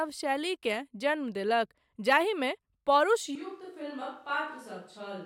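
At 3.36 s the speech turns abruptly roomy and hollow and stays that way to the end, which points to a switch to a distant microphone, likely because the close microphone's feed failed or was dropped. The level falls by about 10 dB, the low end thins, and room noise rises to roughly 35 dB below the speech. Unlike a simple fader dip, the tone and room character change along with the level, and the change is instant rather than a gradual fade.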